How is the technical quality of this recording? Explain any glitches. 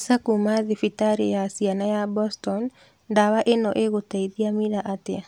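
Nothing in the recording stood out as a technical problem on listening.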